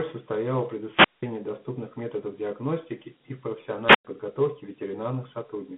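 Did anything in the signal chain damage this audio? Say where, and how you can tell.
Yes. At the codec stage, Dialogic VOX ADPCM coding leaves plainly audible gritty hiss trailing the speech throughout, with the band held to roughly 150 Hz to 3.4 kHz and nothing above 3.8 kHz. At 32 kbps, the 4-bit adaptive steps can't track the waveform cleanly, so quantisation noise rides on every syllable.

In the analogue radio stage there are two wireless microphone squelch dropouts. The first runs from 0.86 to 1.26 s, after "состояла в" and before "доступных методов диагностики и", with a mute of about 185 ms. The second runs from 3.84 to 4.05 s, after "методов диагностики и в", with a mute of about 103 ms. Each time the FM signal fades, hiss rises, and the receiver's squelch gates the output to near silence.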